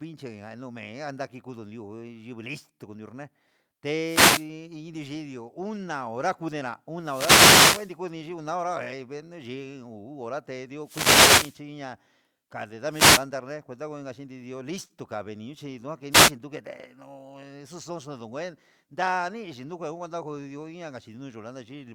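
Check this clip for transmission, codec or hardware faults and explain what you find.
Two faults occur in this speech: repeated wireless microphone noise hits and one short concealed packet loss.

Wireless microphone noise hits occur at 4.01–4.50 s, 6.99–7.97 s, 10.83–11.60 s, 12.90–13.27 s and 16.11–16.32 s. Each time, reflected copies of the FM radio signal cancel at the receiver, so receiver noise rises over the voice, heard as a swish or burst of static.

A short concealed packet loss occurs at 14.85–14.91 s. About 40 ms of audio failed to reach the decoder, which bridged the gap by extending the preceding sound for about 41 ms before blending back, leaving a brief smear or wobble.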